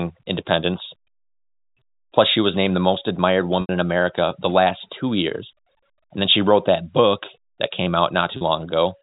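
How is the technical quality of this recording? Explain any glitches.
Two brief dropouts from packet loss with pitch repetition, heard over the narrow telephone band of G.711 coding. At 3.61 s an 80 ms gap gets bridged by repeating the last pitch period, which fades toward silence before a quick cross-fade back. At 8.37 s a shorter 40 ms gap just sounds like a slightly held, buzzy tone.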